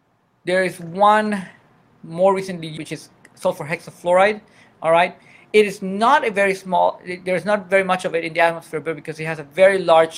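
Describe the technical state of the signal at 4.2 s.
A jitter buffer speed-up runs from 4.06 to 4.24 s: about 50 ms of pitch periods are cut, so the sound hurries at 129% speed with unchanged pitch, and the waveform's cycles keep their length while whole periods go missing.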